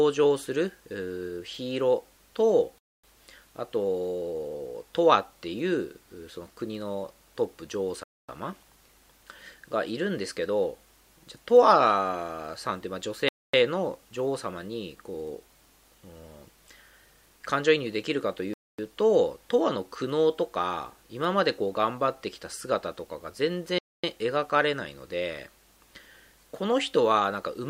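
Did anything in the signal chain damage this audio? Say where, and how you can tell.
Yes, there's a gap between chunks, introduced where the audio was chunked for streaming or playback. 250 ms holes open at 2.79, 8.04, 13.29, 18.54 and 23.79 s, one after every 5-second block. Silence gets inserted at each join, so nothing's lost, just interrupted.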